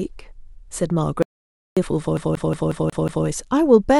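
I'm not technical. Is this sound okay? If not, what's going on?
No, it has two problems. From 1.22 to 1.77 s there's an audio dropout to silence: the speech cuts off into dead silence, with no room sound at all, for about half a second, likely because the input briefly disconnected or got muted, so that bit is simply gone.

Then from 2.17 to 3.26 s it sounds like a CD stuck on one turn: the same tiny slice of speech, just under a fifth of a second long, plays six times in a quick, even stutter, with a short silent gap at each jump back.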